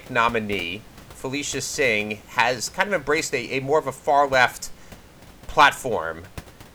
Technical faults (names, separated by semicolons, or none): none